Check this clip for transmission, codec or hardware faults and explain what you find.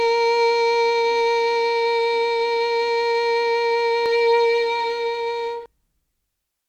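One fault turns up in this music. From 4.06 to 5.66 s, a doubled audio track: likely a slower second capture path mixes the music in again roughly half a second late, at similar loudness, with no decay, and it starts and stops abruptly.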